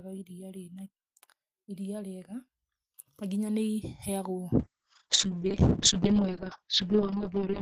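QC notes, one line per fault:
4.61–7.61 s, call bitrate drop: at 4.61 s the audio loses clarity and stays degraded for the final 3.0 s, never recovering before the clip ends. The encoder's bitrate falls from 32 kbps to 6 kbps after the call's bandwidth estimate collapses. With so few bits, Opus codes the speech coarsely, giving a rough, watery texture, and narrows the audio band from 20 kHz to 8 kHz, so the air above 8 kHz vanishes and the speech turns muffled.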